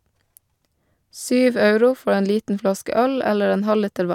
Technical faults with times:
none

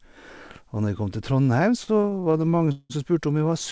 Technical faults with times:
1.84-2.92 repeated stalls (stutter)

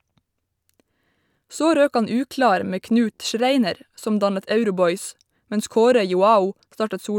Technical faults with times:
none

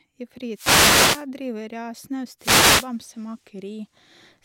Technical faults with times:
0.53-1.26 wireless microphone noise hit
2.38-2.89 wireless microphone noise hit

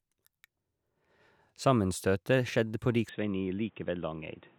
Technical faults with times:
3.09-4.58 input switched to a poorer device

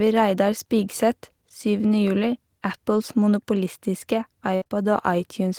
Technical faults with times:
4.55-4.63 burst of packet loss
4.63-4.72 short concealed packet loss

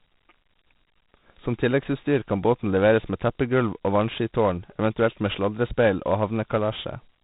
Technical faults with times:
0.00-7.24 4-bit ADPCM compression

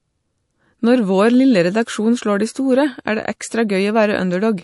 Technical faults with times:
0.00-4.63 MP3 compression

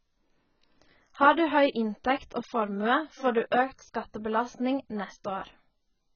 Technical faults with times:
0.00-6.15 AAC compression

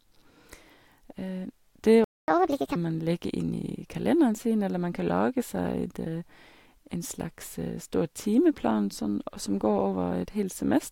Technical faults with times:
2.04-2.28 playback stall
2.28-2.76 catch-up at higher speed

